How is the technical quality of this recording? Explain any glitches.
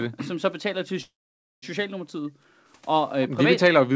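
The speech clip has three distinct glitches. Its bandwidth stops at 8 kHz, which fits a G.722 call codec and is normal for a call.

From 1.02 to 1.64 s there is a call audio freeze, likely from packets held up in transit that left the jitter buffer empty. The last sound is stretched into a fading fill, silent for about half a second. The speech then resumes exactly where it stopped. Unlike a dropout, nothing is lost; the 0.6 s gap is simply inserted.

From 1.98 to 2.70 s the background is gated by the echo canceller. The room sound falls by about 40 dB for roughly 0.7 s while the far end's loudspeaker plays, then returns. This differs from the freeze: no sound is stretched and no time is inserted. Only the ambience is pushed down.

From 3.21 to 3.28 s an echo leak is heard. A brief scrap of the other side's voice comes back 341 ms late, about 20 dB below the speech. It is likely residue that the far end's canceller missed. 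Because it is a discrete, delayed single voice rather than a smooth tail, it is not room reverberation.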